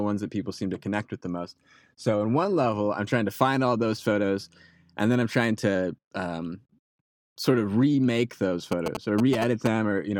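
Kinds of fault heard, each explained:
GSM signalling bursts, 8.72 to 9.68 s: a nearby 2G phone is exchanging short groups of radio bursts with its network rather than carrying a steady call, and the audio circuitry rectifies that radio energy into sound. Near the end of the clip this comes through as a galloping dit-dit-dit of brief buzzes at about 217 Hz, sitting only slightly below the level of the speech for just under a second.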